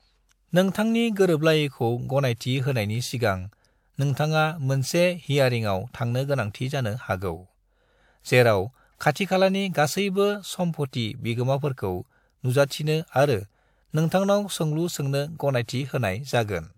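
From 12.66 to 12.70 s, a brief hiss leads a speech onset: pre-echo, the codec's block quantisation noise smeared 47 ms ahead of the attack.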